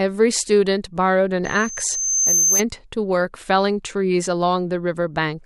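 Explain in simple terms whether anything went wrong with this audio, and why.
A loudspeaker feedback squeal appears from 1.45 to 2.63 s. The microphone is picking up its own loudspeaker, so a single high tone near 6.3 kHz feeds on itself, swelling over about a second until it is slightly louder than the speech.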